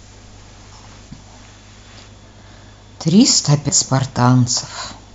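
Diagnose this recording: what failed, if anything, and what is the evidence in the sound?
A CD skip at playback: at 3.69 s a tick and a mute of a few milliseconds, then the speech resumes elsewhere as the laser jumps tracks.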